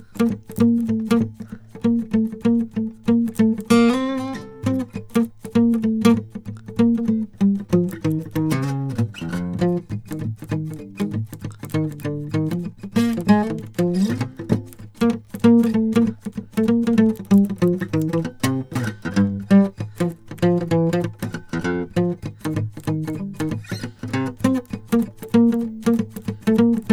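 No technical faults are audible in this music.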